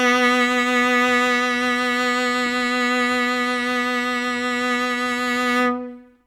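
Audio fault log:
Nothing stood out on listening to this music.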